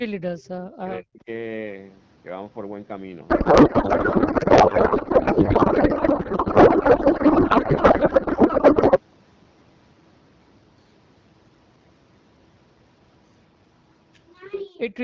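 Speech suppressed in double talk, 0.0 to 1.28 s: the speech drops in pieces, by up to about 40 dB, likely an echo canceller turning down both sides while the far end talked.

Codec payload misread, 3.29 to 9.00 s: octet-aligned AMR frames were read as bandwidth-efficient, so the speech becomes garbled noise and warble that barely follows it.

The same suppression returns from 14.54 to 14.8 s as a brief cut of about 40 dB.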